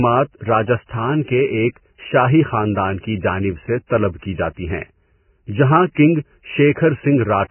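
Vorbis compression, running from start to finish, is the likely cause of the damage heard across the speech. Nothing survives above 3 kHz, so the treble is simply cut away, and what remains is quantised so coarsely that fine spectral detail turns into grainy noise of similar energy. The speech sounds hissy and rough, with smeared consonant onsets and a heavily degraded quality that points to a very low bitrate, around 10 kbps.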